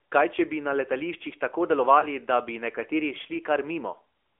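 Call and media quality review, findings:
AMR narrowband mobile codec, whole clip. Speech band-limited to roughly 300 Hz to 3.4 kHz, nothing above 4 kHz. Plainly audible codec damage: buzzy, synthetic voicing from the pulse-excited vocal tract model. The coarseness fits a mid AMR-NB mode around 10.2 kbps. Probable component: mobile leg of the call, 2G/3G radio path.

Lost AMR speech frames, 2.00 to 2.06 s. Brief dip or warble in the speech, then recovery with weak or rough onset. Consistent with a single lost 20 ms frame: the decoder repeated the last good pitch and vocal tract settings at reduced gain. Too short to fade to silence. Probable component: radio link, frame checksum failure.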